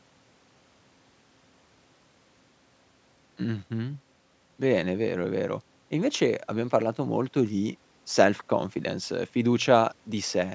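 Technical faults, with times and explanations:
No technical faults are audible in this speech; the call microphone processing trims the lowest bass and leaves nothing above 8 kHz, as that path normally does.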